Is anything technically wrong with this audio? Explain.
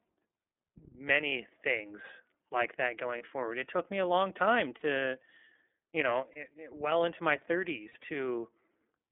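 Yes, the speech has two problems. Throughout, an iLBC codec limits the band to about 250 Hz to 3.5 kHz, which fits its 30 ms, 13.33 kbps mode. Speech sounds rough and synthetic, and a spectrogram shows nothing above 3.5 kHz.

Lost iLBC frames appear at 1.28 s, at 3.18 s after "like that", and at 4.77 to 4.83 s. They appear again at 6.32 s, between "you know" and "it well into my", and at 7.89 to 7.97 s after "it well into my". Each gap of 30 to 60 ms is filled with a repeated, noisy pitch cycle. It sounds like a brief buzzy held vowel and shows as smeared, regular striations.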